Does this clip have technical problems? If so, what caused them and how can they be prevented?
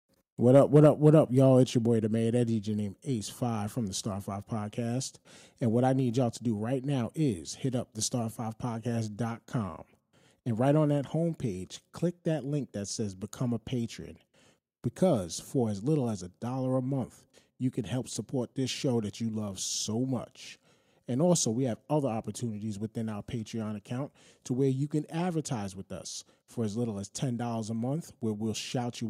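Yes. From 0.55 to 1.09 s the loudest syllables take on a harsh, crackling edge, with peaks pushing about 2 dB past the converter's limit and a small fraction of samples, under one percent, flattened at that limit. This is likely microphone overload: the input volume was set high enough that the converter ran out of headroom and cut off the tops of the waveform, adding distortion. Setting the input level so speech peaks sit well below full scale prevents it.

The level of both the speech and the background drops abruptly in single steps at 0.86 s (about 2 dB), 1.86 s (about 3 dB), 6.0 s (about 1 dB) and 10.98 s (about 1 dB). The first comes in the middle of the distorted stretch, which points to microphone volume stepped down by the call software, likely reacting to the overloaded peaks by lowering the device's input gain. Starting with a lower input level, or turning off automatic microphone adjustment, avoids these steps.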